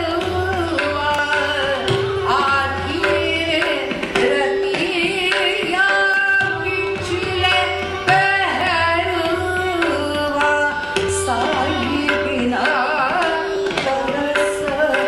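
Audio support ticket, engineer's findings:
Audio missing between chunks: brief skips at 1.19, 3.66, 6.14, 8.61, 11.09, 13.56 s. About 30 ms lost each time. Likely chunked recorder dropping audio at 2.5 s boundaries.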